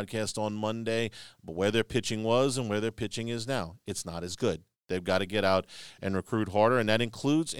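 A short speech recording with no audible technical fault anywhere in it. There is nothing here that calls for a time, a value or a cause.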